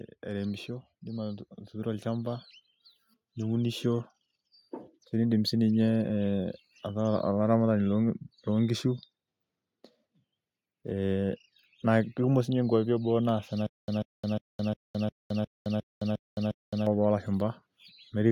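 Right at the start, from 0.27 s to 2.5 s, there's automatic gain rising. The gain control decided the input was too quiet and eased its level up by about 4 dB over those two seconds or so. Because it's a gain change on the whole signal, the voice and the background noise swell together. You hear the room come up along with the speech, not just the talker getting louder.

Later, just after "naas ena", there's a stutter with silent gaps running from 13.66 s to 16.87 s. A roughly 140 ms burst of sound comes back nine times, each followed by about 216 ms of dead digital silence, so it pulses at a steady 356 ms period. The likely cause is the player or stream stalling and replaying its last fragment on each retry before running dry. Whatever should have played in that stretch is simply gone.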